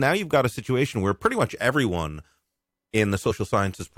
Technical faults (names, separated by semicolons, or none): damaged data in a compressed stream